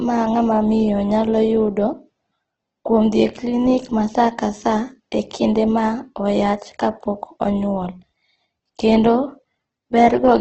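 Opus compression runs throughout: nothing above 8.2 kHz, and the speech sounds grainy and rough, likely from a low rate fitting 12 kbps in CELT mode.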